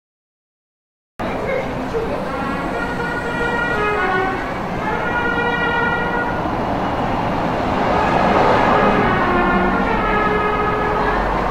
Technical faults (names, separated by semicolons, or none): cut-off start